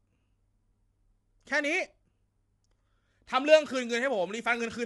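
From start to finish the speech sounds rough and grainy, with noise between the pitch harmonics and nothing above 11.6 kHz. The likely cause is low-delay AAC compression: AAC-ELD's short frames resolve pitch poorly, and the damage fits a bitrate near 32 kbps.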